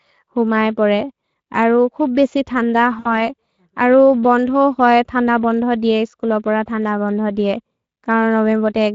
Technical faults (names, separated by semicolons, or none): Speex codec; VoIP packet loss concealed by the speech codec